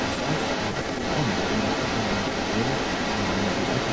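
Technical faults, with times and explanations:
Throughout, echo leak: a second copy of the speech trails the original by 160 ms, roughly as loud as the speech itself. The likely cause is a far end playing the call over a loudspeaker, where its echo canceller failed to remove what its microphone picked back up, so that leftover was returned down the line.
0.83 to 1.07 s, speech suppressed in double talk: within this window the speech briefly sags, dipping by about 5 dB for a combined stretch of roughly 150 ms, heard as a momentary softening rather than a full dropout. This points to both sides talking at once, with the echo canceller likely unable to tell the local talker from the returning echo and so turning both down together.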